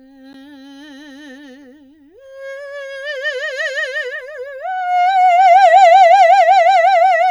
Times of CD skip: 0.33

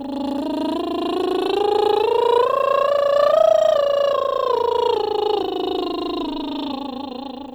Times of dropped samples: 1.79, 2.99

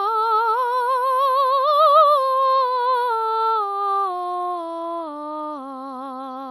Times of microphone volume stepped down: none

